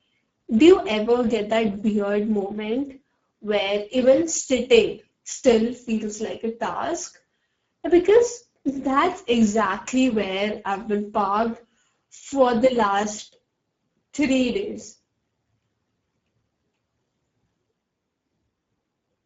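From start to finish the speech carries plainly audible Speex codec damage. The CELP coder doesn't have enough bits to model the excitation, which fits a low bitrate of around 10 kbps. Nothing comes through above 7.6 kHz.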